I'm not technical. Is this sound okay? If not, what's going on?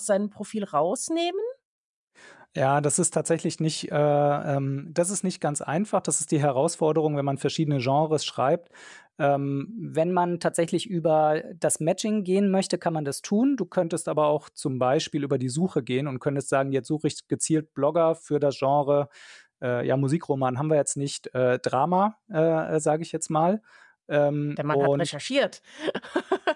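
No. From 9.7 to 13.82 s there is a wrong sample rate fault: the audio plays back faster than it was recorded, with no correction, so speech runs 1.09 times too fast and 1.47 semitones higher, sounding rushed and slightly squeaky, until just before "aber auch zum".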